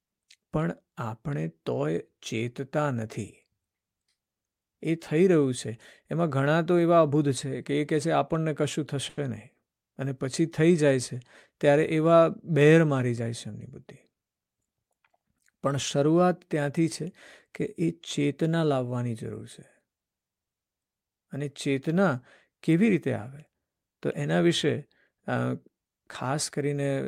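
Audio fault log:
9.09 to 9.19 s, short stall from a late packet: a packet didn't show up on time, so the jitter buffer ran dry and the receiver held the last bit of sound going for about 80 ms until the packet landed, then carried on right where it left off. Nothing gets lost, but that sound hangs a touch too long with a faint buzzy dip, and everything after it now runs about 80 ms later than before.
13.2 to 14.45 s, jitter buffer speed-up: the buffer had built up more audio than it wants, so the receiver clawed the extra delay back by snipping out lots of tiny pitch-period-sized slices one after another. Pitch stays the same, but that stretch plays at about 107% speed and loses around a tenth of a second in total, so the speech sounds a bit rushed there, like someone briefly talking faster.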